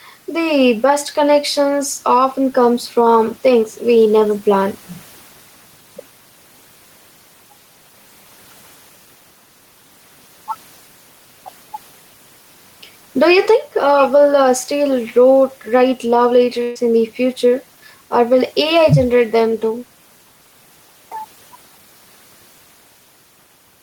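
Gain pumping runs through the whole speech clip. The background, sitting about 37 dB below the talker, swells in the pauses and drops by about 5 dB under each loud syllable, likely from excessive gain feeding a fast limiter. The waveform envelope looks flattened, and the noise floor visibly breathes between phrases on a spectrogram.

From 16.63 to 16.77 s, a burst of packet loss removes about 120 ms of audio. The receiver fills that span by stretching the last sound, which fades into a held buzz or hiss before speech jumps ahead. A spectrogram shows smeared, flat bands, and the waveform shows a decaying tail and then an abrupt restart.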